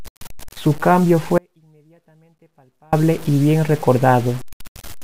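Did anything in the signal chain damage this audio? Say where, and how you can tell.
Yes, two things. Throughout the clip there's grainy distortion that rides along with the speech and gets harsher on quiet parts, sitting only about 20 dB below the signal. That's low bit depth without dither, likely from a sample-format conversion that truncated to 6 bits.

There's also an audio dropout to a faint residue from 1.38 to 2.93 s. The speech cuts out abruptly for about 1.5 s, leaving only a faint sound roughly 35 dB down, then snaps back on "y bien". That's likely a driver or buffer stall while the downstream path stayed live.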